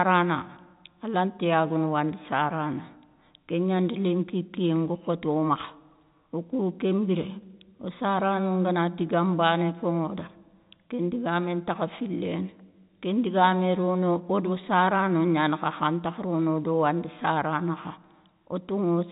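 Nothing stood out on listening to this telephone-band speech.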